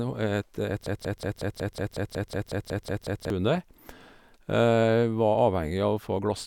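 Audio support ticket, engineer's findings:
Stuttering repeat of a roughly 0.18 s speech fragment, 0.86–3.30 s, 13 times back to back. Broken-record loop, likely a stalled player re-sending its last buffer; intervening speech lost.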